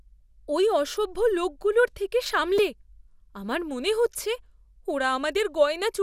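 At 2.58 s there is a repeated buffer. New audio arrived late, so the device replayed its last block of speech twice more. Each block lasts about 2.9 ms, which fits a 128-sample buffer. The hard joins give a brief click or buzz, and a few milliseconds of speech are lost.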